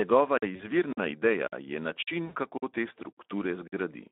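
Speex codec damage runs through the whole speech clip: the CELP coder has too few bits for the excitation, so the voice sounds hoarse and noisy within a narrow band of about 250 Hz to 3.6 kHz, which fits a low-quality setting near 11 kbps.

A gap between chunks opens at 0.38 s and recurs at 0.93, 1.48, 2.03, 2.58, 3.13 and 3.68 s. Each is a 50 ms hole of silence, returning after every 0.5 s chunk of audio.

VoIP packet loss concealed by the speech codec occurs at 0.55 to 0.65 s, with about 40 ms of audio lost, and again at 2.25 to 2.37 s, with about 100 ms lost. The decoder stretches its last pitch and filter into a fading sound, and the sound stays weak briefly after packets resume.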